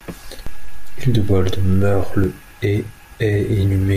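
At 0.47 s the signal's zero line jumps by about -16 dBFS, a DC step such as an offset input being switched in, and holds until 2.24 s, when it returns. Each jump lands as a low thump or click while the speech carries on unchanged.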